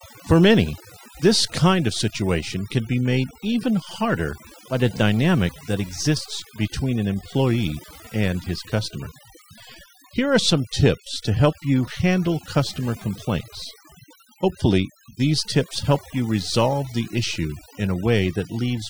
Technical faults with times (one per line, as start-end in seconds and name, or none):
0.00-18.90 overdone noise removal